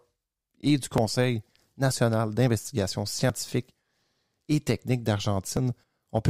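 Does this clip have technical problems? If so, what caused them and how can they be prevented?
Yes, there are four quick skips in the speech, at 0.98, 2.48, 3.30 and 5.57 s. Each is a small jump where roughly 10 to 30 ms vanishes without any gap. That's likely a dropped buffer (overrun), where the recorder fell behind and the hardware overwrote samples before they were read. A larger input buffer or higher priority for the capture thread would prevent it.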